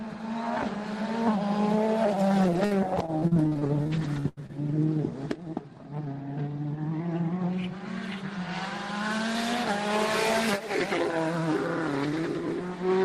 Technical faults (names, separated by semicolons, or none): repeated packet loss (robotic sound)